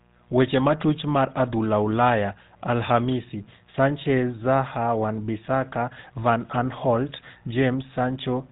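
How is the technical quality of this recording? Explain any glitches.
The speech sounds buzzy and gravelly from start to finish, with a dull, band-limited top end. That roughness is GSM full-rate codec damage, plainly audible and consistent with 13 kbps coding. The codec rebuilds the voice from a vocal-tract model excited by coarse, regularly spaced pulses that keep only every third sample, and nothing above about 3.8 kHz survives.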